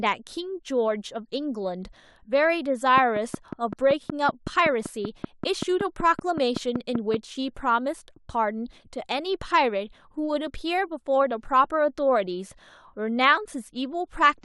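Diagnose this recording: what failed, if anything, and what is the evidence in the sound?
A train of clicks runs from about 2.98 s to 7.15 s, a steady ticking at roughly 5.3 per second, around twenty clicks in all, with peaks standing out maybe 10 dB above the speech. They're evenly spaced and alike in shape, so something is injecting the same pulse on a fixed cycle. The stage is likely analogue wiring picking up interference from nearby gear, or a faulty connection or power supply.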